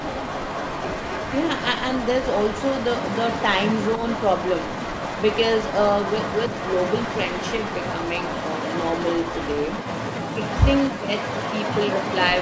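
An echo leak runs through nearly the whole clip: 0.0 to 3.47 s, 3.67 to 5.42 s, 5.58 to 10.19 s, 10.46 to 10.90 s, and 11.19 s to the end. A delayed copy of the speech trails the original by 272 to 280 ms. It sits about 10 dB below. A loudspeaker echo the far end's canceller failed to remove is the likely cause.

Speech suppressed in double talk appears at 10.31 to 10.41 s and again at 10.90 to 11.13 s. The speech drops sharply, by about 25 dB at its deepest. Each gap lasts a fraction of a second. An echo canceller that likely mistook overlapping talk for echo turned it down.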